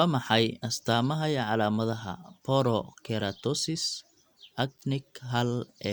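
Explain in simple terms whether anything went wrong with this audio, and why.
Nothing went wrong here.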